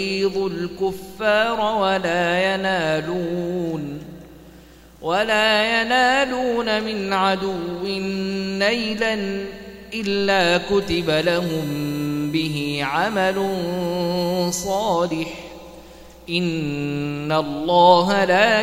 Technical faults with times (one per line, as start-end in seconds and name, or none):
10.82-14.94 USB whine